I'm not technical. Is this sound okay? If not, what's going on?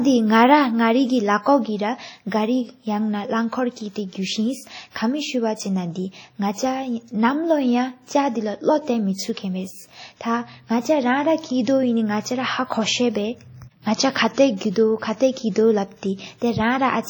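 No. Throughout the clip the speech has a ringing, washy quality, as if each sound smears before and after itself, with a hiss that swells and fades along with the voice. This most likely comes from heavy WMA compression, squeezing the file too hard. What sets it apart from ordinary background hiss is that the noise follows the speech rather than staying steady, and quiet detail sounds blurred away rather than simply buried.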